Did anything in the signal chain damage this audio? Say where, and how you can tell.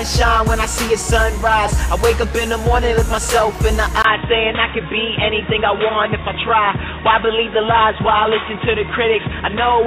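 Yes: at 4.02 s a 20 ms gap precedes a dull, boxy tone with nothing above 3.8 kHz and new noise about 30 dB down, likely an input switched to a poorer device, not codec band-limiting.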